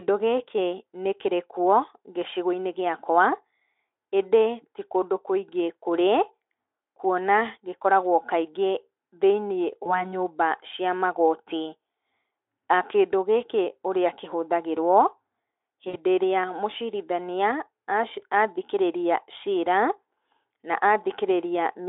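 VoIP packet loss concealed by the speech codec occurs at 9.83 to 10.15 s and 15.89 to 15.98 s. About 20 ms, then 40 ms, went missing, and the Speex decoder filled each gap by extending its last pitch and filter at falling gain. The result is a brief buzzy or noisy smear within the 300 Hz to 3.6 kHz band.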